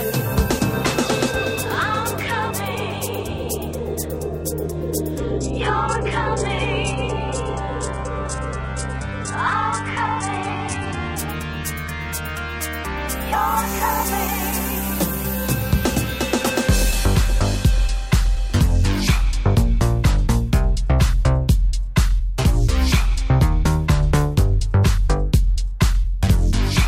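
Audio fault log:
5.18–11.18 s adaptive stream at a lower bitrate: for six seconds the sound suddenly turns dull, with nothing above 11 kHz and heavier codec artefacts, then returns without a gap. This points to a slowed connection forcing a switch to a much lower-bitrate version.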